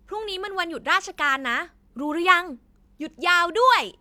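Nothing goes wrong anywhere in this bit of speech, so there's simply no fault to point to.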